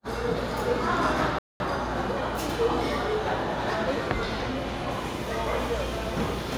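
At 1.39 s the audio just drops out for about 215 ms, a clear hole mid-flow until 1.6 s, then picks up again. That's a playback stall: most likely the player starved for data or its thread got blocked, so output went silent until it recovered.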